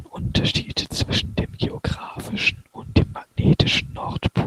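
Nothing in the speech stood out as a technical fault on listening.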